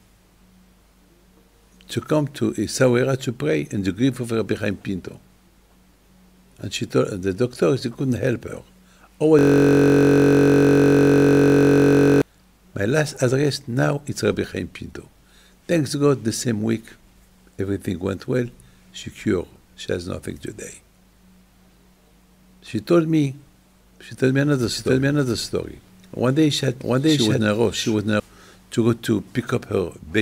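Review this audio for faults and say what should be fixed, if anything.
A system hang loop runs from 9.39 to 12.22 s. One 21.33 ms slice repeats at 46.9 Hz, giving a steady buzz rather than a machine-gun stutter, which fits a 1024-sample buffer. Prevent it with a watchdog that mutes the output when the driver stops refilling the buffer.

A doubled audio track sounds from 24.74 to 28.20 s. A full-band copy at roughly equal level trails by about 0.7 s. Its lack of decay or room colour separates it from an echo, and it starts and stops abruptly. The likely cause is a second capture path or edit holding an offset copy. Prevent it by routing each source through only one capture path.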